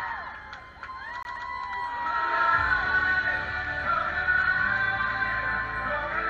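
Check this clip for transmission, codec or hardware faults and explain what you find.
One playback fault stands out. From 1.23 to 1.49 s, a 132 ms slice of sound repeats twice in a fast stutter: a CD stuck on one turn, the laser jumping back at a scratch.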